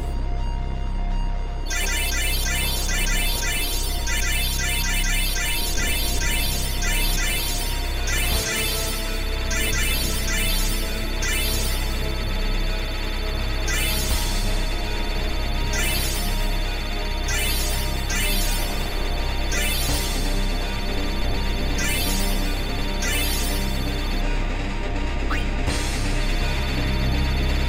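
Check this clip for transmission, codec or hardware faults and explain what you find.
No transmission, codec or hardware faults.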